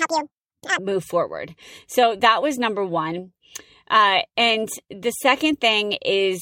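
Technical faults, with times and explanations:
0.0–0.79 s: section at the wrong speed. This opening stretch runs at about 1.91 times its proper rate, likely from playback against a mismatched clock, so the speech is hurried and raised by roughly ten semitones, high and chipmunk-like, before snapping back to normal pace and pitch.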